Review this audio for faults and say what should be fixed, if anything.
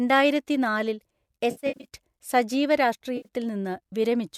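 Two spots of AAC frame loss with concealment in this speech. From 1.51 to 1.85 s, about 240 ms of audio drops out in bursts scattered over 340 ms, the longest run around 70 ms. The decoder patches each gap from the last good spectrum, so you get a smeared, noisy, phasey stretch. A shorter 80 ms patch at 3.17 to 3.27 s sounds the same. The audio likely runs through a low-delay AAC-ELD link at 64 kbps with light codec damage, whose short frames of about 10 ms fit those gap lengths. Adding forward error correction or a deeper jitter buffer on that link should keep these frames from going missing.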